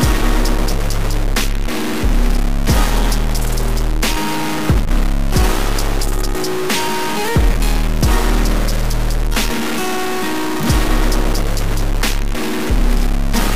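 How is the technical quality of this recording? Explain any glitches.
The recording is marred by one fault that runs through the whole clip: a harsh, buzzy distortion consistent with a stuck bit. The likely cause is one data bit held permanently at 0 or 1, so about half of all samples are shifted by a fixed step of roughly -15 dBFS, a fairly high-order bit. Unlike clipping, the grit does not track loudness peaks. Even the quiet gaps fill with a rough, steady noise, because near silence the stuck bit flips with every change of sign.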